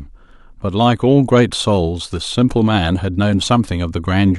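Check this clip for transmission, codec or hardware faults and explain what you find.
One fault stands out: clock slip clicks from 0.61 s to 3.68 s. Two devices are likely running on unsynchronised clocks about 30 ppm apart, so a single sample gets dropped or repeated roughly every 0.7 s. That produces about five faint, evenly spaced ticks across the speech.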